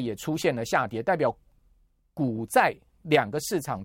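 A short speech recording with no technical faults to be heard anywhere in the signal.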